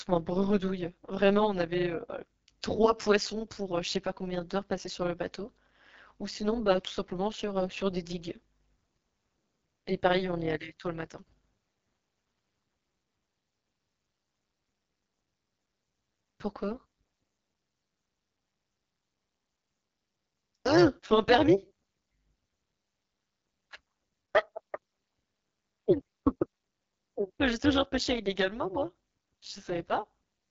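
From the first second to the end, the speech runs through an AMR wideband (HD Voice) codec at what sounds like 8.85 kbit/s, one of its lowest rates. The pulse-driven vocal model can't keep up there, so voices turn rough and raspy, and nothing reaches above 7 kHz.

Layered on top for the whole clip is overlap-add ripple. The audio was chopped into windowed frames and rejoined with overlaps that don't sum evenly, so the level dips by about 11 dB around 200 times a second. You hear it as a metallic buzz.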